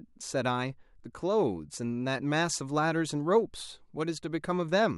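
No technical faults can be heard anywhere in the recording; the signal stays intact and continuous for its whole duration.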